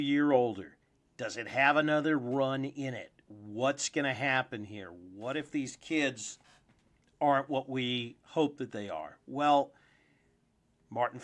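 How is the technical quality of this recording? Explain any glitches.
No technical glitches can be heard anywhere in the recording. The speech runs continuously, without any disruption to point to.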